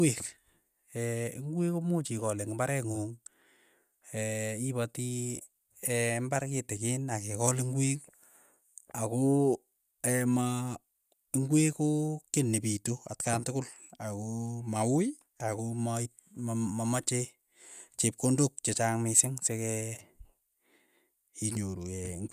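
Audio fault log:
The speech signal holds steady levels and continuous timing with no audible disturbance anywhere in the recording.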